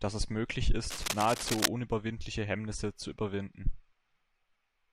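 A speech clip with cable scratch noise from 0.89 to 1.68 s: dense, uneven scratching sits only a few dB below the speech. It is likely a worn cable or connector being moved. Unlike steady hiss or isolated clicks, it comes as one irregular, rustling burst.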